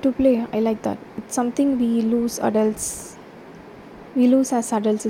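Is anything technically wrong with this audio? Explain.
No, nothing is technically wrong with this audio.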